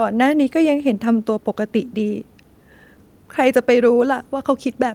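Nothing technically wrong turns up in this short bit of speech, so there's no problem to point to here.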